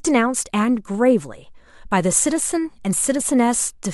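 Damaged data in a compressed stream occurs at 2.16 s in this speech recording, heard as a single, extremely brief blip. At that point some bytes of the encoded stream are wrong, so the decoder cannot make sense of the frame it is reading. It loses its place and hunts for the next valid frame header before playback carries on. The disruption lasts only a few milliseconds, so it registers as a quick glitch.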